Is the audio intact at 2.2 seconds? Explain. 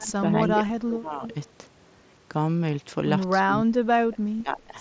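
Yes, the audio is intact at 2.2 seconds, with the speech carried cleanly through the call microphone processing and the wideband Bluetooth mSBC headset link, which together limit it to nothing above 8 kHz.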